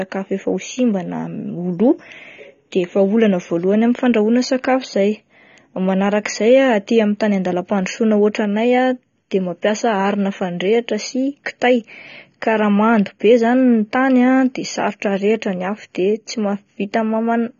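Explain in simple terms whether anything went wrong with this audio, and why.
Yes, the speech sounds dull and muffled from start to finish, with nothing above about 6.9 kHz and a warbly, fizzy edge on hissy sounds. That points to AAC compression, likely squeezed too hard. A plain muffling filter would sound just as dull but stay smooth, without the swirling texture.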